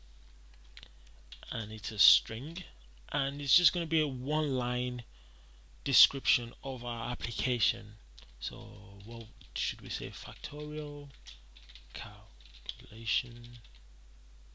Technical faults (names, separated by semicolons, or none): none